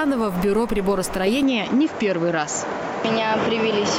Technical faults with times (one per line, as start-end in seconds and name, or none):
1.43-3.99 input switched to a poorer device